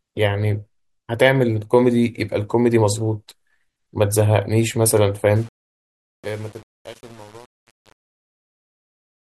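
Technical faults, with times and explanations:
5.36–9.21 s, truncation distortion on a fade: The gain stage handling the fade-out, which starts around 5.4 s and runs to 9.21 s, rounds each sample to a coarse grid without dither, and the steps fit about a 7-bit word. As the speech level sinks toward the smallest step, the waveform collapses into a few square levels, so the tail of the fade turns gritty and buzzy.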